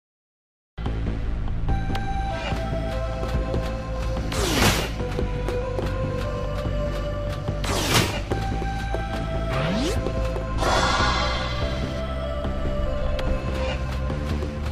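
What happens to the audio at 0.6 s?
At 0.6 s the audio is still digital silence, part of a cut-off start: capture began late, so sound enters abruptly mid-event at 0.78 s with no natural attack.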